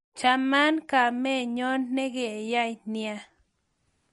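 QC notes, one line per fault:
Throughout: MP3 compression, likely the cause of the plainly audible coding damage across the speech. Nothing is present above 11.2 kHz, a hard treble cut of the kind an encoder makes when bits run short, which fits a low bitrate around 48 kbps. With so few bits, weak frequency lines are dropped and return from frame to frame, giving a watery, swirling texture, with s sounds turning metallic and consonant onsets smeared.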